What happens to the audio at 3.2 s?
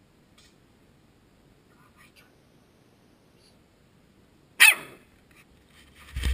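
At 3.2 s the audio sits inside a section at the wrong speed, running from 2.16 to 3.54 s. That stretch plays about 1.23 times too fast, likely from being fitted to a mismatched clock, so it sounds hurried and raised by about four semitones. On a spectrogram the harmonics jump upward and spread apart at 2.16 s, with events squeezed closer together until they drop back at 3.54 s. The waveform shows tighter cycles through the span.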